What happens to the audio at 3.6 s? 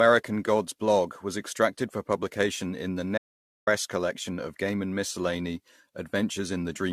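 At 3.6 s the speech is inside an audio dropout to silence that runs from 3.18 s to 3.67 s, about half a second. The sound cuts off mid-flow and returns just as abruptly, with silence in between. The likely cause is that the input was lost while the recorder kept writing silence. Unlike a noise gate or a fade, nothing remains in the gap, not even room tone, so whatever was said there is simply gone.

Across that moment, and the whole clip, there is also generation loss. The speech sounds swirly, hollow and smeared, with softened consonant attacks, more degraded than a single AAC-LC pass at 64 kbit/s would leave it. That points to repeated re-encoding, likely around five times, with each pass quantising again on a shifted frame grid. That is what separates it from ordinary one-off low-bitrate artefacts.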